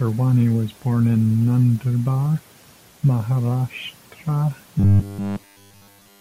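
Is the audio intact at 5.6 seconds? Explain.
No. At 5.6 seconds the audio has robotic sound from repeated short buffers, lasting from 4.80 to 6.21 seconds. It is likely caused by playback repeating a roughly 10 ms block while new audio is skipped. This forces a rigid, metallic 100 Hz buzz.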